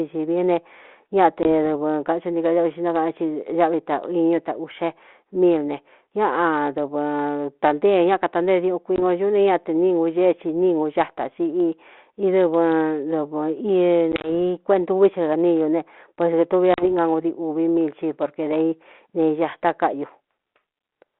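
Packet loss on an ADPCM call knocks the decoder's predictor and step size out of step with the sender's, leaving hard-edged silent holes followed by a briefly distorted return. It happens at 1.43 s (20 ms, a couple of packets, just before "dɨvɨ kathu ntií"), at 8.96 s (20 ms), at 14.12 to 14.3 s (about five packets, 50 ms scattered over 120 ms), and at 16.74 s (40 ms, after "ne pueso kētuvi a").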